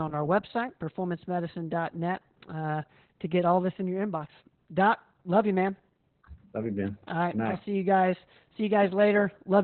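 Throughout, Opus voice compression at what sounds like about 8 kbps in SILK narrowband mode cuts everything above 4.3 kHz, leaving the speech muffled, hoarse and slightly robotic.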